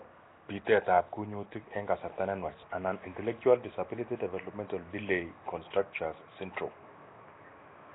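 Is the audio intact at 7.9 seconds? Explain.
No. At 7.9 seconds, as throughout the clip, the speech carries a rough, hissy halo and a smeared, underwater quality, with nothing above 3.9 kHz. This is likely Nellymoser compression, at a rate fitting about 16 kbps, where bands starved of bits are filled with noise.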